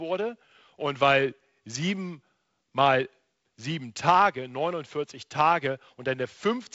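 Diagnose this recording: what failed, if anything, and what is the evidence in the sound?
Nothing here has failed: the speech comes through G.722 wideband telephone coding at what sounds like 48 kbit/s, with the light graininess that rate brings to the lower band and no content above about 7.7 kHz, which is just how that codec shapes the sound.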